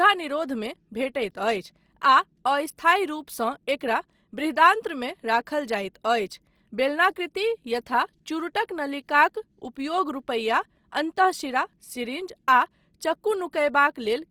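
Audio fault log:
throughout, Opus compression: the speech was likely squeezed through Opus in its music mode at a rate that fits roughly 24 kbps, too few bits for every band, so thin bands are filled by copying lower ones or with noise. The plainly audible result is a grainy, rough, noisy texture on voiced sounds rather than swirling, while the band stays full, with content reaching about 20.2 kHz and no muffling.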